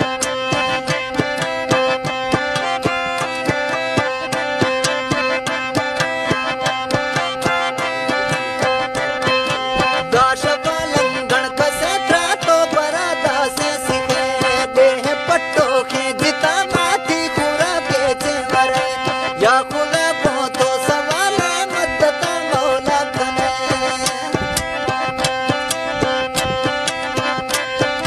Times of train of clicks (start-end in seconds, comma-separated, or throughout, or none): none